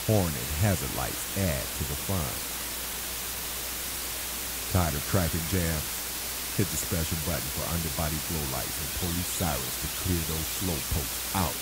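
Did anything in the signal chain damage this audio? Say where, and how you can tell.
Yes. Mains hum runs throughout: a steady 60 Hz tone, roughly 15 dB below the signal, from a ground loop or transformer coupling in the analogue wiring.

Low bit depth with dither, also throughout, comes from sample-format conversion: a constant, even hiss about as loud as the signal, undistorted, which fits dithered rounding to 4 bits.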